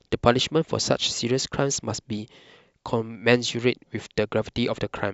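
A short speech recording with no technical faults to report: the signal holds steady throughout, with no dropouts, distortion or timing disturbances audible anywhere in it.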